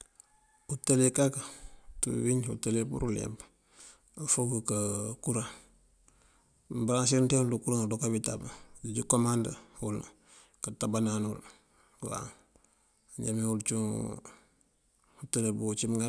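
A speech recording with no audible technical faults.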